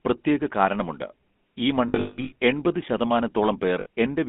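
Throughout, the speech has passed through the GSM full-rate codec. This early mobile coder rebuilds the vocal tract from a filter model and excites it with a sparse, regularly spaced pulse train. The buzzy, gravelly roughness it leaves is plainly audible here, and the sound fits its 13 kbps rate. The line passes only about 200 Hz to 3.5 kHz, so the speech is thin, with no low body or upper brightness.

From 1.88 to 2.33 s, lost GSM frames add about 340 ms of missing audio scattered across 440 ms, with the longest gap around a fifth of a second. The decoder fills each gap by reusing the last good frame's settings at decreasing level, so the sound freezes into a rough, metallic ring that sags in loudness before normal speech resumes. A second, short loss of 60 ms at 3.80 to 3.86 s produces a brief burst of the same metallic hold.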